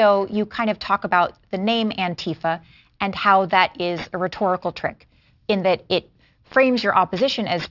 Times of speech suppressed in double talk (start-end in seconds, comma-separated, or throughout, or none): none